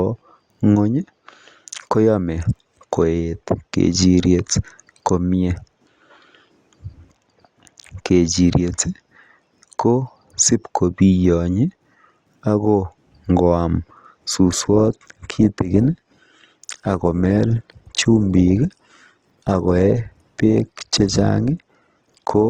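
An adaptive stream at a lower bitrate takes over at 14.45 s and runs to the end of the speech. The player switched to a cheaper version of the stream when the connection slowed, so the quality steps down abruptly with no gap or dropout. From that point coding artefacts grow audible, which fits a fall from roughly 64 kbit/s to 16 kbit/s Opus.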